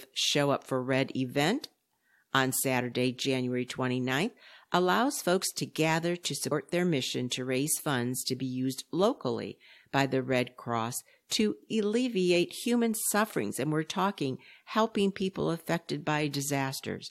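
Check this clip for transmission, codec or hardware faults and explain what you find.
One fault is audible. At 6.50 s, after "folks to gather to", there is damaged data in the compressed stream. The decoder loses frame sync there. It gives a brief glitch before "their mission to raise".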